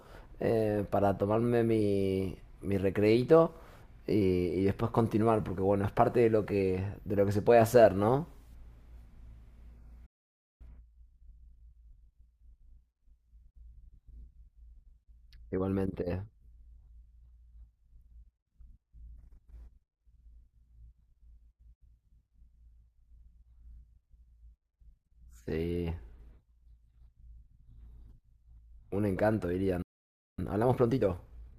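Speech, interrupted twice by a playback stall: the audio drops to silence from 10.06 to 10.61 s (about 0.54 s) and again from 29.82 to 30.38 s (about 0.56 s), cutting off mid-flow. Each gap is most likely the player running dry of buffered data or having its output thread blocked, so nothing reaches the output until it recovers. Each stall is followed by time-compressed catch-up, as the player works off the backlog by splicing out short slices and cross-fading across the joins. From 10.61 to 12.77 s, and from 30.38 s to the end, the speech runs at about 1.25 times normal speed with its pitch unchanged, sounding hurried.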